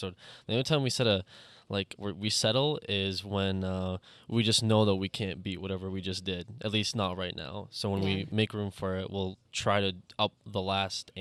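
No technical faults can be heard anywhere in the clip. Nothing in the audio breaks, drops out or changes character at any point.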